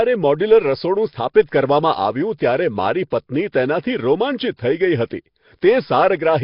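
Nellymoser compression runs through the whole speech clip, with heavy damage: a rough, hissy halo, a smeared underwater quality and nothing above 5.3 kHz. The likely cause is Flash's Nellymoser Asao codec, which fits a rate near 22 kbps. It gives each fixed block too few bits, so weak bands are replaced with noise.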